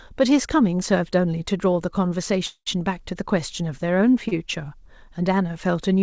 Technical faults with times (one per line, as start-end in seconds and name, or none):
2.46-2.68 call audio freeze
4.28-4.39 short stall from a late packet